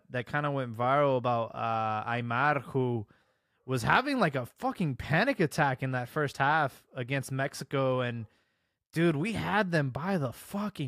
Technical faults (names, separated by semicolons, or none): none